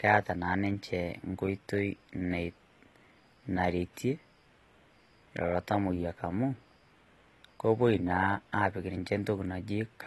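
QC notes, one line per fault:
Throughout: AAC compression, likely at a low bitrate near 32 kbps. Nothing sounds above 12.1 kHz, and coarse quantisation leaves plainly audible dullness and smearing.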